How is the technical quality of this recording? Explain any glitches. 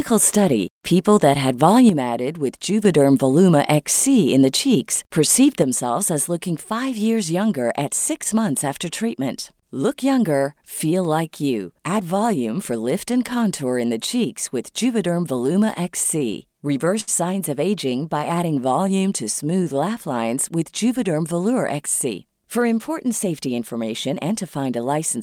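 The recording has several timing and level faults.

At 1.89 s, just after "study people that had", the level drops abruptly by about 6 dB until 2.85 s. This is most likely one channel dropping out before the mono sum. It happens again at 5.62 s, after "in the cheeks perceived", and lasts to the end. On a waveform the envelope shrinks at once.

From 16.04 to 17.09 s the audio stutters with repeated stalls. It pauses six times, the longest for 71 ms, and about 12% of the span is held-over sound. The receiver's jitter buffer kept running dry, so it stretched the last sound each time. On a spectrogram this shows as short smeared, repeated frames.

From 17.90 to 19.77 s a jitter buffer slow-down plays the sound at about 94% speed with the pitch unchanged. Repeated pitch periods add 127 ms, which makes sounds drawn out. The spectrogram shows harmonics stretched in time without any shift in frequency.

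From 21.74 to 24.33 s a jitter buffer speed-up runs the sound at about 106% speed. Trimmed pitch periods remove roughly 150 ms to cut the buffer delay. The sound comes across as hurried, and on the spectrogram its features are compressed in time at the same pitch.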